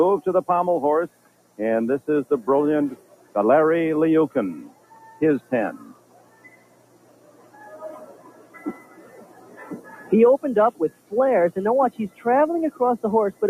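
A speech-tuned noise suppressor has been left running on this material, and you can hear it treating sustained parts as noise to be removed. Across the whole clip the level swings by roughly 20 dB as it clamps down and lets go, so the sound pumps and thins out. Transients and attacks mostly get through, while anything held or decaying gets pulled under. That's the noise suppressor applied to music or sounds problem in a nutshell. On top of that, there are specific spots where sound is cut by the noise suppressor harder than elsewhere. It drops about 10 dB at 1.09–1.58 s, about 9 dB at 2.96–3.35 s, about 10 dB at 4.69–5.04 s, and about 10 dB through the long stretches at 5.93–7.61 s and 8.09–9.59 s. It dips about 7 dB at 9.84–10.11 s and about 10 dB at 10.72–11.12 s. In each of these the steadier content sinks or its tail gets chopped short.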